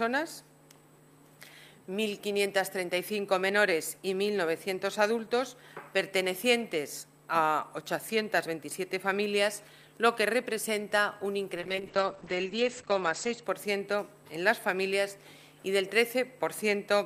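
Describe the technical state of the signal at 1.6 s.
At 1.6 s the signal is intact, with no dropout, distortion, glitch or other fault audible at that point.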